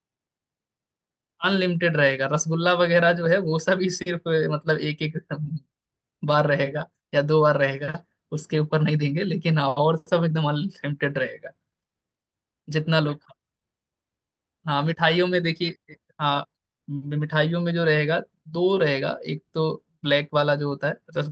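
The speech comes through a working call-codec path, carrying only the ordinary coding character and band limit of a normal call, with no technical fault anywhere in the signal.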